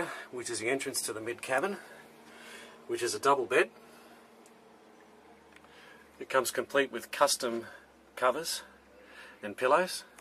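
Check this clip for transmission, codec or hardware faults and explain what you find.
Checking this clip, I find no faults to explain.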